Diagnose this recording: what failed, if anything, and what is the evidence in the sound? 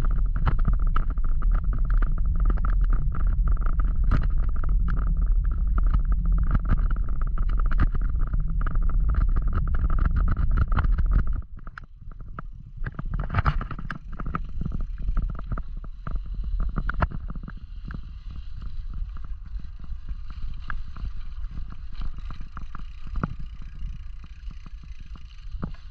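Nothing in the recording points to a failure at any stage of the chain, and the signal stays continuous and stable from the first sample to the last.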